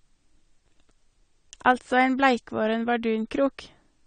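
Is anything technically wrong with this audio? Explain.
Yes. AAC compression damage is plainly audible throughout this speech. The sound is dull and smeared, and sibilants turn fizzy and warbly. The likely cause is AAC-LC coding at a low bitrate, consistent with about 32 kbps. Too few bits forces a lower cut-off and leaves holes in the spectrum.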